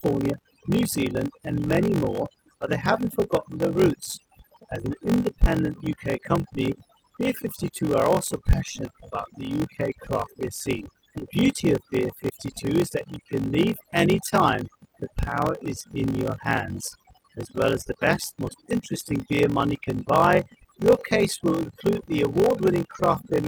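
From start to end, overdone noise removal strips quiet frequency bands along with the noise, leaving speech over near-silence. The spectrogram shows dark, hollowed gaps with isolated twinkling specks. Throughout, a block size mismatch (padded) inserts a zero gap into every block, producing a 46.9 Hz buzz that fits 1024-sample reads. Speech runs at 0.861 speed with roughly normal pitch, and the waveform shows regular flat dropouts.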